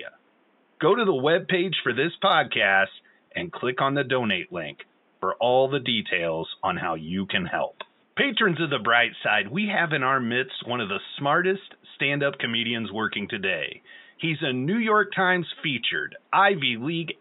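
There are no technical faults in this speech; the only background is the room's own noise, about 40 dB below the voice.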